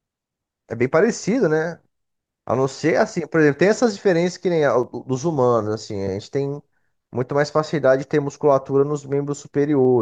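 Two clocks running at slightly different rates, likely off by around 70 ppm, make the buffer between them slip a handful of samples each time it overflows or runs dry. Between 2.32 s and 9.85 s this clock drift buffer slip recurs every 2.5 s, about four times, heard as a regular click in the speech.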